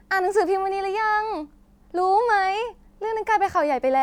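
No faults can be heard anywhere in this speech recording.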